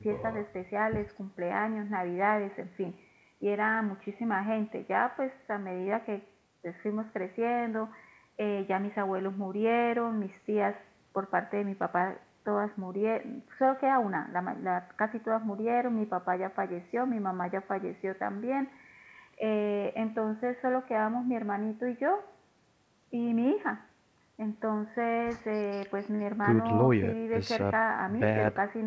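Speech with no technical faults; the content tops out at 8 kHz, consistent with the wideband call path it went through.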